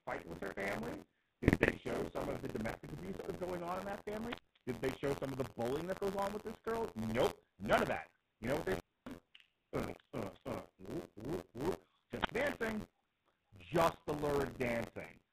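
Speech runs through the GSM full-rate codec for the whole clip. Nothing above 4 kHz survives. The pulse-driven vocal-tract model leaves the voice buzzy and gravelly, and the roughness is plainly audible. That sound fits the 13 kbps full-rate codec. Buffer tearing adds a steady robotic rattle at 86.1 Hz, heard only while there is signal. The writer and reader of the playback ring buffer have slipped, which fits a 512-sample buffer. Roughly a sixth of each period replays audio from about 50 ms earlier, with hard joins either side. GSM bit errors break in at 1.48 to 1.68 s, between "with her family" and "show some of the", and again at 9.83 to 9.94 s, just before "uh uh whoop whoop". Corrupted filter, pitch and gain values reach the decoder, so the voice squawks and gargles. Wireless microphone squelch dropouts occur at 4.26 to 4.59 s, at 8.62 to 9.16 s after "know what", and at 12.19 to 12.34 s. 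In each, hiss rises as the FM signal fades. The receiver then mutes for about 0.22 s, 0.31 s and 70 ms respectively.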